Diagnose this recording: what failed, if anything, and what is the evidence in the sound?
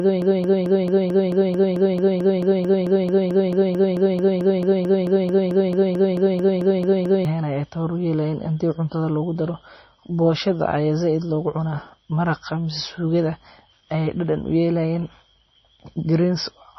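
Broken-record loop, likely a playback or stream stall: from the start to 7.25 s, a 220 ms fragment repeats back to back, 32 times, replacing the audio.

MP3 compression, likely at a low bitrate near 24 kbps: throughout, nothing above 5.9 kHz, with heavy watery, swirly artefacts from spectral lines dropping in and out.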